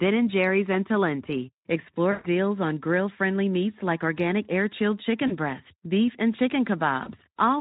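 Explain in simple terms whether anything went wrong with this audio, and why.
Three short dropouts in the speech are VoIP packet loss concealed by the speech codec. At 2.11 to 2.27 s about 120 ms of audio went missing. The decoder filled the gap by stretching the last sound into a fading buzzy or noisy smear. Briefer 20 ms losses occur at 5.27 to 5.33 s, just before "breast beef and", and at 7.03 to 7.09 s. Each leaves the voice weak or distorted for a moment after the audio resumes, because the Speex codec rebuilds each moment from the one before.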